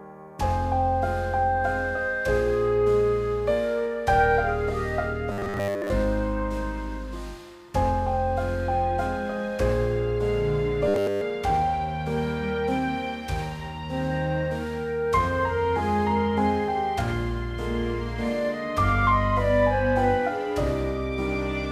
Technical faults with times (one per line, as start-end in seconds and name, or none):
5.32-5.91 robotic sound from repeated short buffers
10.88-11.21 robotic sound from repeated short buffers